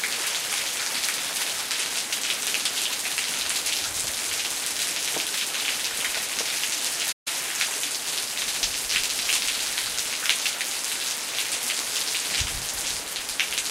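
At 7.12 s the sound cuts out abruptly in mid-flow and the output falls completely silent for about 139 ms, until 7.28 s, when it picks up again. This gap is a playback stall, and it sounds like a hiccup rather than a natural pause. The likely cause is that the player briefly ran out of buffered data, or its audio thread was held up, so nothing reached the output until it recovered.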